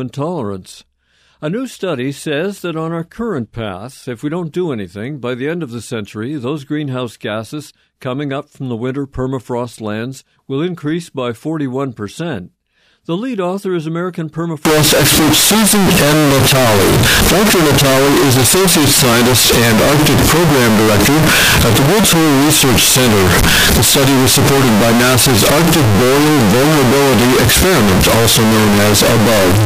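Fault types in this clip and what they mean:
Float read as integer: from 14.65 s to the end the speech turns nearly square at a fixed, very loud level with noise equal to speech, likely 32-bit float samples read as 32-bit integers.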